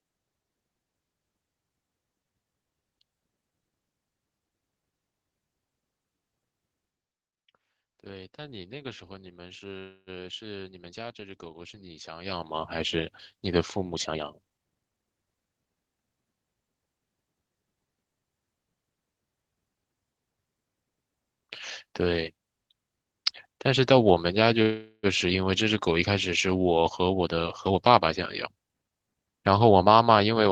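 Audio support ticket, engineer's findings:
Call audio freeze at 9.79–10.10 s and 24.62–25.06 s. Sound stalls into a fading buzz, about 273 ms and 411 ms of fill, then a short silence. Likely delayed packets draining the jitter buffer. Playback resumes where it stopped. Nothing lost, but the delay grows.

Jitter buffer speed-up at 13.94–15.08 s (123% speed) and 27.05–28.01 s (132%). Audio hurried, pitch unchanged. Buffer over target. Receiver cut repeated pitch-period slices, about 0.3 s in total each time, to pull the delay back.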